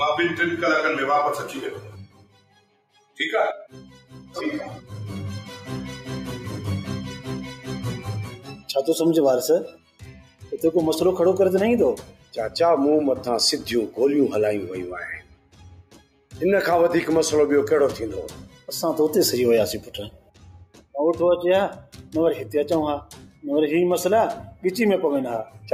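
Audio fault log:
Throughout, noise suppressor applied to music or sounds: a speech-tuned noise suppressor stays active on material it was not designed for, and it keeps judging sustained content and ambience to be background noise. It lowers the level in response and then releases, so the overall level rises and falls by about 5 dB as the suppressor keeps changing its mind. Onsets mostly come through while held parts sag, which gives the whole clip a pumping, thinned character.
2.06–3.17 s, 8.37–8.68 s, 9.72–10.47 s, 12.03–12.33 s, 15.2–16.33 s, 18.52–18.68 s, 20.1–20.94 s, 23.1–23.43 s, sound cut by the noise suppressor: at these moments the suppressor treats the sound itself as noise and pulls it down much harder than elsewhere, by about 9 to 12 dB at the deepest point. The longest dips last close to a second and the shortest a fraction of one. Steady or decaying parts of the sound sink or fade out early.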